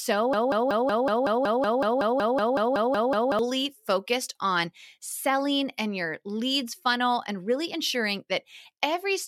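From 0.33 s to 3.39 s the speech falls into a broken-record loop: a fragment of about 0.19 s plays again and again, back to back, 16 times in succession, giving a fast, mechanical stutter. This likely comes from a player, encoder or stream that stalled and kept resending the last fragment it held. The audio that belonged in those three seconds never arrives, so the speech resumes after 3.39 s with that stretch missing.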